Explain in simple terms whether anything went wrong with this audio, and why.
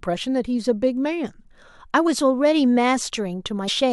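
Something did go wrong near the end. At 3.67 s the speech suddenly jumps forward. This is called compressed frames skipped. A few chunks of the stored audio were lost, so about 70 ms vanished, which fits three frames of 23 ms.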